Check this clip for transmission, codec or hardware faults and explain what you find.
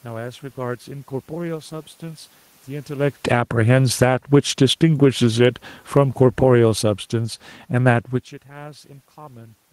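The clip has gain-control faults, with the level pumped down, up and down again between about 3.1 and 6.5 seconds.

Automatic gain falling, from 3.14 to 4.22 s and again from 4.79 to 6.48 s. The automatic gain control judged the input too loud and pulled its gain back gradually, by about 8 dB the first time and about 7 dB the second. The speech starts out loud and then sinks over roughly a second, with the room noise dropping right along with it. That shared drop marks it as a level change in the chain rather than at the microphone.

Automatic gain rising, from 3.4 to 5.22 s, overlapping both falls. Here the control judged the input too quiet and raised its gain by about 4 dB over nearly two seconds. Speech and background swell together. Because it competes with the falling corrections on either side, the level pumps instead of settling. The talker's own shift in distance around 3 s, and again around 8 s, changes only the voice and leaves the room noise steady.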